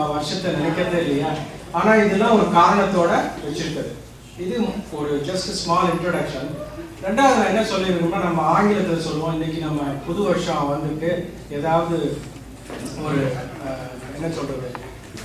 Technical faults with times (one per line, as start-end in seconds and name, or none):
none